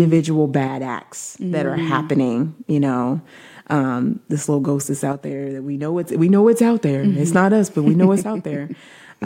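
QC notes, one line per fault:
0.68–1.77 s, 5.13–6.03 s, 8.20–9.26 s: one channel drops out. Speech abruptly falls about 6 dB, likely a lost stereo channel; the waveform shows steps down.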